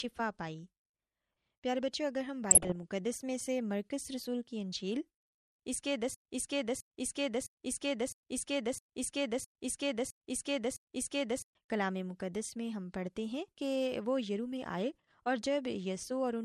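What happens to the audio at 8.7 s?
At 8.7 s the audio is caught in a broken-record loop. The player or stream likely stalled and kept resending the last fragment it held, so from 6.15 s to 11.55 s a 0.66 s piece of speech repeats exactly, back to back, eight times. The speech that should have played there is lost.

The same moment also carries MP2 compression damage. The audio was likely encoded with MPEG Layer II at a low bitrate, and the sound fits about 80 kbps. Starved upper sub-bands switch off and the remaining ones are coarsely quantised, so the repeated fragment sounds dull, with a gurgling, granular distortion that is plainly audible.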